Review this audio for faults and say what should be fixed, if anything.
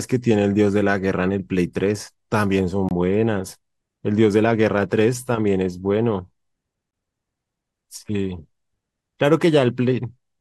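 Two short, hard-edged holes cut into the speech at 2.89–2.91 s and 6.91–6.93 s, each about 23 ms of dead silence, with the sound resuming abruptly on the far side. This is a gap between chunks. The audio was handled in 4-second pieces, and silence was inserted at each join, from codec padding or from playback starting each piece late. Nothing is lost, but the flow is broken at every boundary. To prevent it, trim codec padding and schedule each chunk to begin exactly where the previous one ends.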